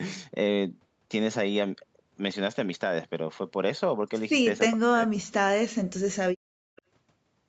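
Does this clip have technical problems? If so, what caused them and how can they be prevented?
Yes. From 4.72 to 5.59 s the speech dips, by about 40 dB at its deepest. This is likely speech suppressed in double talk, where the echo canceller confused the talker with loudspeaker echo. A headset or a better double-talk detector would prevent it.

From 6.76 to 6.82 s a faint copy of the speech returns 428 ms late, about 30 dB below the voice. This is likely an echo leak from a loudspeaker the canceller didn't fully cover. Stronger echo cancellation or a headset would stop it.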